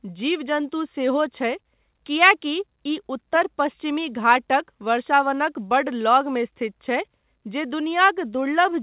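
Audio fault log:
No faults heard in this speech.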